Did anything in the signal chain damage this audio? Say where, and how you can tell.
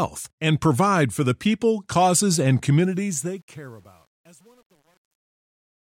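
Yes. The damage comes from a gain or sample-format stage that requantises the fade-out, which begins at roughly 2.8 s, without dither: truncation distortion on a fade. Right after "the people causes and", from 2.84 s, the tail turns gritty, and from 3.41 s to the end at 5.87 s it is at its worst, which fits about 9 bits. The waveform shows stair-stepped, squared-off cycles, and the spectrogram shows broadband harmonic hash instead of a clean decay.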